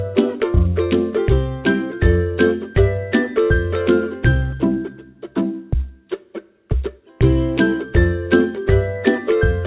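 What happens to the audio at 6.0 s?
Nothing goes wrong at 6.0 s: the audio carries on intact through the call path, with its usual narrowband sound and nothing above 4 kHz, which fits a G.711 mu-law codec.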